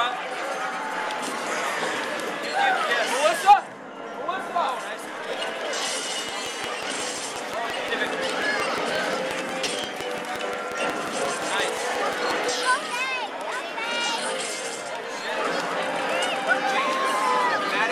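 From 6.29 s to 12.50 s a train of clicks runs over the audio: around forty near-identical pulses at a steady 5.6 per second, each peaking roughly 15 dB above the surrounding sound, so they tick clearly over the sound and through pauses. The cause is likely interference from nearby equipment or a faulty connection or power supply. The even pacing and repeated shape set it apart from random crackle or isolated dropout glitches, which scatter irregularly and vary in character.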